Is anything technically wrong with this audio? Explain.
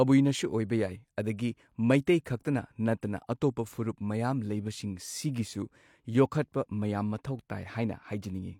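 Yes, there's pre-echo in this speech, three quick instances at about 2.05, 2.24 and 2.44 s. A transform codec has smeared its quantisation noise across each block, so the noise sized for a sharp attack leaks into the quiet just before it, for about 19 ms on the first and 12 ms on the other two. You hear a brief hiss leading into each onset, and the attacks come across soft and blurred.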